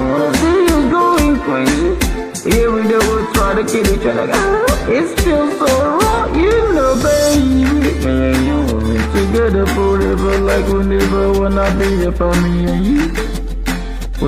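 A gritty crackle rides on the loudest moments from start to finish, catching only the peaks rather than smearing a fuzz over everything. That is hard clipping: the signal was pushed about 5 dB past what one stage in the chain could carry, so the tallest peaks were sliced off flat. Under one percent of the waveform is cut, and those squared-off tops throw harsh high harmonics into the spectrum, heard as crackle on each peak.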